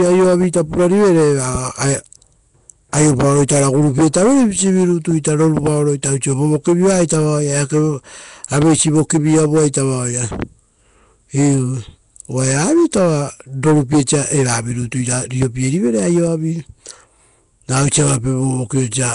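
Speech throughout, and the whole thing has that rough, hissy halo and smeared underwater feel you'd recognise from Nellymoser compression, likely Flash's old Nellymoser Asao mic codec. The damage is plainly audible: weak bands get starved and backfilled with noise, so the voice sounds grainy and washed. There's nothing above 10.6 kHz, and the overall grit fits something around 44 kbps. On top of that there are four loud pops, each a single sharp hit roughly 10 dB above the speech, with the talking carrying on underneath. They land at 1.55–1.58 s, at 8.62–8.64 s just before "vokivi avuaita vaoia", at 10.42–10.45 s just after that same phrase, and at 15.42–15.45 s just before "rivere aioavi". They're likely voltage spikes from a plug, a switch, static or a driver glitch getting into the chain, with the downstream circuitry shaping each one into a short pop.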